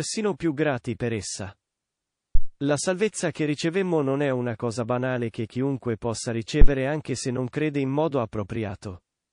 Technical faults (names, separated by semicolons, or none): MP3 compression; pre-echo; phantom power thump